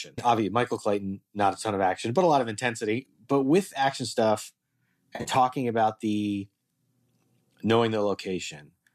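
At 5.14 to 5.30 s, just before "about the", AAC frame loss with concealment refilled 90 ms of dropped audio from earlier spectra, leaving a brief smeared, phasey patch.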